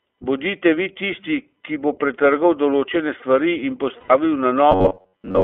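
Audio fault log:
Throughout: iLBC codec. The speech was squeezed through iLBC at a rate that fits 15.2 kbps in 20 ms frames, each coded independently, with the band limited to roughly 250 Hz to 3.4 kHz. The result is muffled, telephone-like speech with a plainly audible rough, synthetic edge.
3.99 to 4.12 s: lost iLBC frames. Right after "pretrgal določene stvari in", about 100 ms of packets went missing, which fits five 20 ms frames. The decoder bridged the gap by looping the last pitch cycle with added noise, heard as a short held, buzzy vowel before normal speech resumes at once.
4.72 to 5.43 s: robotic sound from repeated short buffers. Fresh audio stopped arriving often enough, likely because the playback side kept refilling with the last short stretch it had. About 70% of the sound in this span is repeats, pinning a rigid metallic buzz near 93.8 Hz over the speech.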